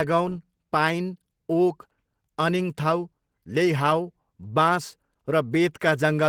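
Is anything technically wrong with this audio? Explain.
Yes. Throughout, the speech carries Opus voice compression in hybrid mode. Below 8 kHz a linear-prediction coder models the voice, and a transform layer fills the band above it, up to about 20.2 kHz. The coarse coding, which fits roughly 16 kbps, sounds plainly hoarse and slightly robotic. A spectrogram shows smeared, blocky texture above 8 kHz, stepping in 20 ms frames.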